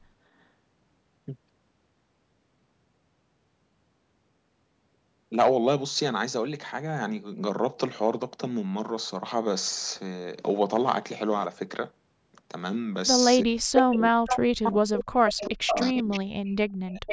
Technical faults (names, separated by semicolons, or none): speech suppressed in double talk; echo leak